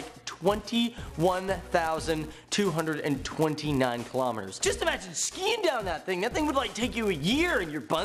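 From the start of the clip to its end, a steady buzz at about 172 Hz rides on the audio. It is the fault called filter restarted on every block. The filter discards its internal state at each block boundary and begins again from zero, so every block opens with a small transient. The repetition rate fits a 256-sample block, and the buzz grows and shrinks with the level of the sound.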